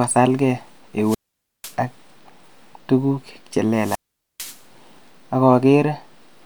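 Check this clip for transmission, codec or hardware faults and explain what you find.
Two wireless microphone squelch dropouts interrupt the speech, from 1.01 to 1.75 s and from 3.72 to 4.64 s. In each, the analogue FM radio link fades until the receiver's squelch shuts the output, leaving a hole of near silence lasting 0.50 s and then 0.45 s. You hear hiss swell briefly before the sound cuts out and then returns. On a spectrogram, broadband noise brightens just before an empty gap, and the waveform flattens to near zero across the mute.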